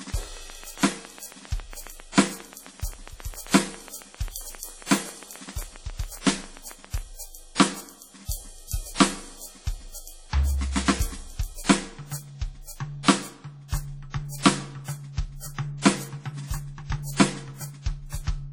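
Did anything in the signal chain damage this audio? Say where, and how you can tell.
Yes. Throughout, the music sounds heavily washy and ringing with breathing hiss, nothing above 18.6 kHz: likely WMA compression at a low bitrate, around 32 kbps.

From 0.10 to 6.99 s there's a regular train of clicks at about 7.4 per second, around fifty of them, up to about 10 dB above the music, likely from interference or a faulty connection or power supply.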